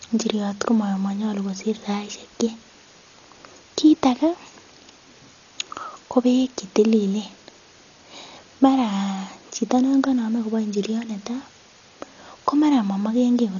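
Dolby Digital compression damage runs throughout the speech, with nothing above 6.9 kHz and heavy coding artefacts. The cause is likely an AC-3 style encoder starved of bits, a loss that fits a bitrate near 40 kbps. It narrowed the band and left many frequency lines without mantissa data. The decoder filled them with dither noise, so the speech sounds dull and muffled, with a rough, fluttering haze around voiced tones.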